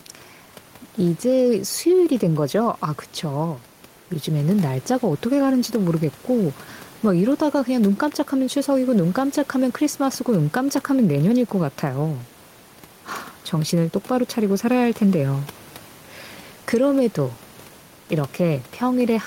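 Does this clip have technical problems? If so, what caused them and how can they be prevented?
Yes. Gain pumping runs through the whole clip. The room noise sits about 29 dB below the speech. The swing is around 5 dB. Loud and quiet passages sit closer in level than they should, so the speech sounds squashed. The likely cause is input gain set far too high, with a fast limiter or compressor clamping down on every peak. To prevent it, lower the input gain and set any limiter so it only catches rare peaks.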